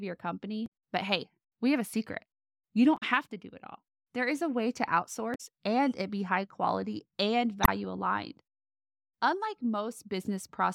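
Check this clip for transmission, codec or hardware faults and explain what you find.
The speech carries one codec fault, damaged data in a compressed stream, at four points: 0.66–0.70, 2.97–3.03, 5.34–5.41 and 7.63–7.68 s. Corrupted bytes make the decoder misread frames and lose sync, producing brief disruptions. On a spectrogram each appears as a short disturbance; the waveform shows an abrupt break.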